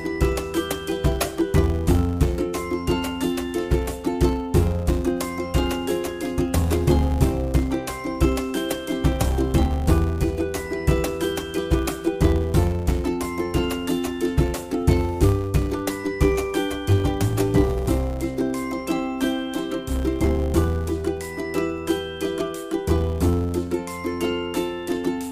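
A filter restarted on every block drops its state every 10 ms, so each block opens with a small transient, producing a 100 Hz buzz throughout that tracks the sound's level.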